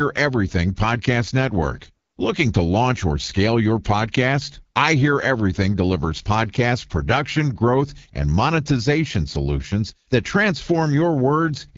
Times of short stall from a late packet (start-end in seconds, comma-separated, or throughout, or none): none